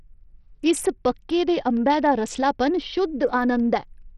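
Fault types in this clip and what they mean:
Bluetooth SBC compression: the speech has the sound of a low-rate SBC link, likely run at about 64 kbps, where the codec splits the signal into a handful of wide sub-bands and, short of bits, starves the upper ones while coarsely quantising the rest. Damage is heavy throughout: a gritty, rough layer rides on the voice and the top end is cut. A spectrogram shows a hard ceiling near 14.2 kHz with patchy, flickering energy in the bands just below it.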